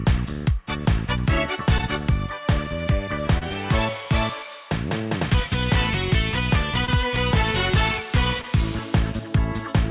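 Short concealed packet loss hits four times, at 1.78, 3.38, 6.85 and 8.42 s. Each time a packet, likely 20 ms, arrived too late, and the receiver papered over the gap by extending the previous sound before blending back, leaving a quick smear or wobble. The audio also stops at 4 kHz, consistent with a narrowband call codec.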